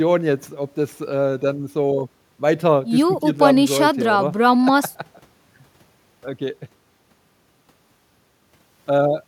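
No technical faults can be heard anywhere in the recording. The speech continues without any audible problem from its first moment to its last.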